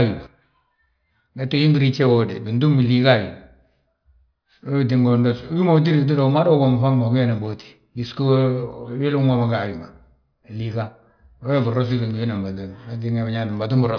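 Nothing in the recording stood out as a technical problem on listening.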